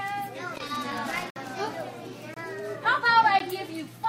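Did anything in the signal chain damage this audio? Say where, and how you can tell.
Yes. Loose connector crackle, 0.55 to 1.52 s: irregular scratching bursts from a worn analogue contact making and breaking, chopping the signal.

Gaps between stream segments at 1.30 to 1.36 s, 2.34 to 2.37 s and 3.39 s: hard-edged silences of 58, 25 and 13 ms, spaced about a second apart, where segment timestamps failed to meet during playback.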